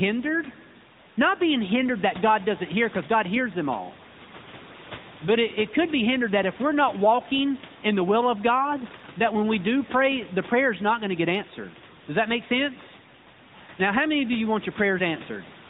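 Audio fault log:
throughout, AMR narrowband mobile codec: the speech has that squeezed phone-call sound, with nothing at all above 4 kHz, so sibilants go dull and the top end is simply missing. The voice picks up a plainly audible buzzy, synthetic edge, because the codec rebuilds it from a vocal-tract model fed by a handful of pulses per short subframe. The room noise, sitting about 17 dB under the speech, gets a swirly texture. The damage level fits a mid-rate mode around 10 kbps.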